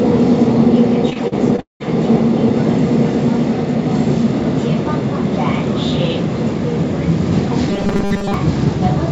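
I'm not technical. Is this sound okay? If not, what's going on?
No. Repeated packet loss hits from 1.10 to 1.82 s: five chunks of sound went missing in transit, and the gaps were patched by stretching what came before, so it sounds choppy and robotic.

From 7.70 to 8.34 s there's robotic sound from repeated short buffers: most of that stretch becomes a rigid 200 Hz buzz, likely from tiny 5 ms pieces being replayed while fresh audio arrived too slowly.

The call connection itself leaves nothing above 7 kHz, so the highest sounds are cut off.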